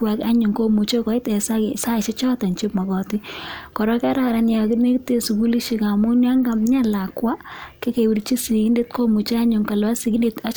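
No technical faults can be heard in this recording.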